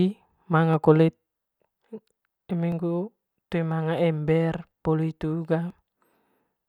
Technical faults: audio missing between chunks

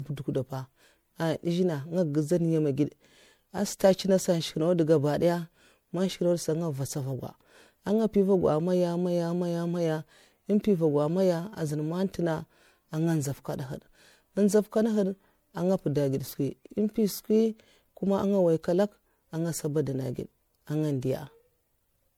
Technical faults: generation loss

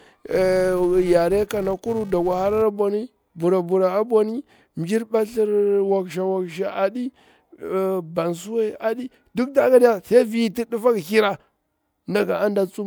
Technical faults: filter restarted on every block

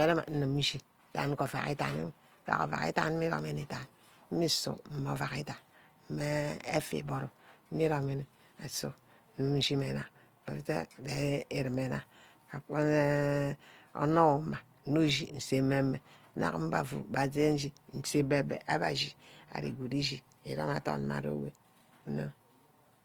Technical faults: Opus compression

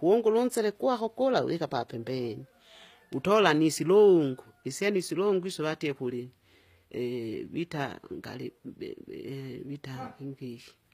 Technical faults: HE-AAC compression

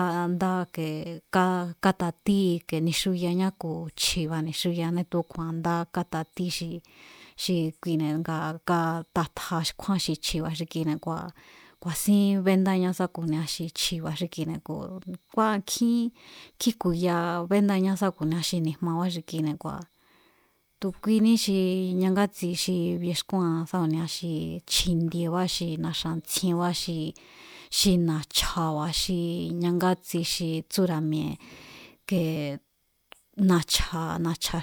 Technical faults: none

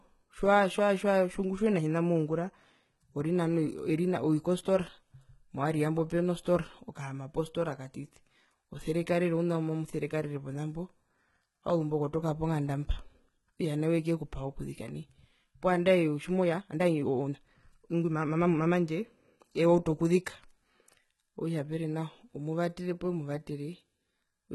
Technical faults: HE-AAC compression; time-stretched section

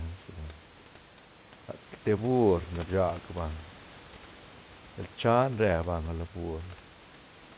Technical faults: none

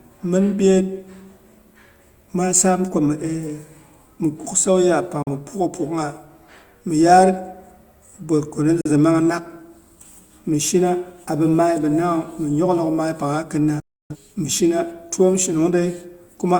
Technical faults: digital broadcast dropout

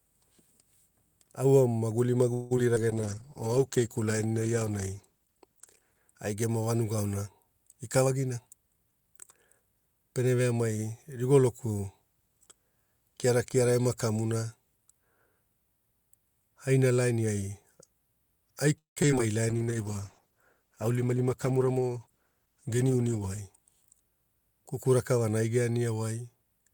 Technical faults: call audio freeze; short concealed packet loss; jitter buffer slow-down; call bitrate drop; jitter buffer speed-up; repeated packet loss (robotic sound)

